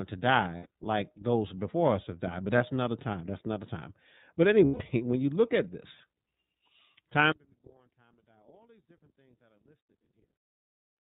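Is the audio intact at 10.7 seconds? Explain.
No. Throughout the clip the speech carries iLBC codec damage: narrowband, with nothing above 4 kHz, and each 30 ms frame coded on its own, which gives a rough, slightly synthetic edge. Because it fits a rate of about 13.3 kbps and not a plain low-pass filter, the harshness comes with the dullness.

From 7.32 s to the end the level collapses by about 36 dB, leaving only a faint residue of the speech. The likely cause is one channel inverted: with reversed polarity, the centred content cancels when the channels are summed to mono. Unlike a dropout or a fade, the faint difference between the channels stays audible.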